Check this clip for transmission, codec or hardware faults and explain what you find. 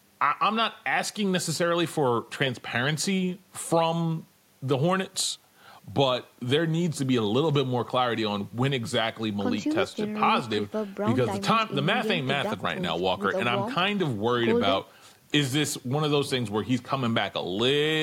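Nothing to report; no faults turn up anywhere in the speech.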